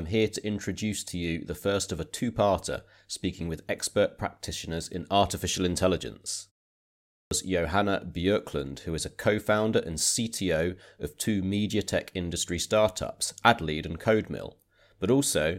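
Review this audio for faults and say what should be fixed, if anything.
At 6.99 s, speech resumes abruptly out of silence with its opening sounds missing, a clipped start after a pause. About 0.32 s is swallowed, through 7.31 s. The pause before it lasts only 0.56 s, yet that was long enough for the output device to drop into a low-power or idle state. When the sound returned, the device needed roughly a third of a second to wake and lock again, so the opening sounds never reached the listener. The fix is to keep the output path active through silences, either with a low-level keep-alive signal or by disabling the device's idle sleep, so playback restarts without losing any sound.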